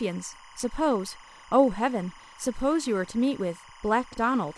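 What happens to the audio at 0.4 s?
From 0.36 to 0.46 s, the speech is hit by frames out of order. Two adjacent chunks of coded audio were decoded in swapped order, so this short stretch plays with its two halves exchanged. Each half lasts about 23 ms, which points to a single coded frame on each side of the swap. You hear a brief garbled flutter. No time is lost.

Timecode bleed also runs under this moment, as it does throughout. Linear timecode from a nearby track or cable has leaked into the audio. Its square wave flips between tones near 1 kHz and 2 kHz. It is clocked at 25 frames per second. It sits around 25 dB below the speech and is heard as a steady chirping warble in the background.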